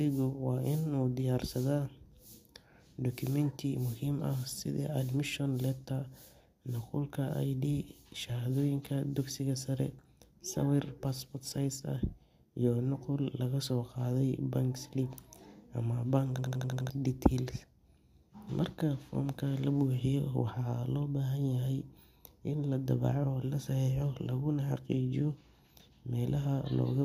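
At 16.38 s the speech falls into a system hang loop until 16.90 s. The driver stalled while the hardware kept replaying one 85 ms slice, fitting a 4096-sample buffer. It repeats six times at 11.7 Hz, a machine-gun stutter. About half a second is lost.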